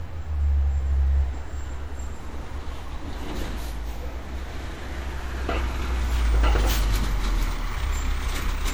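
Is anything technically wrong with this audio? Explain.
Yes. Throughout, the sound is swirly, smeared and hollow with blurred attacks, which points to generation loss, likely from repeated MP3 re-encoding, about seven passes, consistent with 96 kbit/s.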